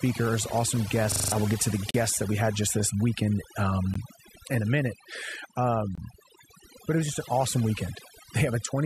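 Across the whole speech clip, overdone noise removal has been applied. The suppressor pulls individual frequency bands down to nothing wherever they approach its noise estimate, so the background is near silence with twinkling specks. A spectrogram shows scattered isolated dots between blank patches, and the quiet parts of the voice are eaten away.

From 1.12 to 1.32 s a system hang loop occurs. The system stalled while the audio hardware kept replaying one 40 ms piece of its ring buffer five times, giving a rapid 25 Hz stutter in which about a fifth of a second of real audio goes missing. The waveform shows five identical blocks.

A gap between stream segments appears at 1.91 to 1.94 s, lasting 36 ms. Two more follow, one at 3.94 s (15 ms) and one at 5.95 to 5.98 s (25 ms). They fall every 2 s, where the segment time stamps fail to meet and the player inserts silence. Each is a hard-edged dropout, visible as a flat line in the waveform and a clean vertical blank stripe in the spectrogram.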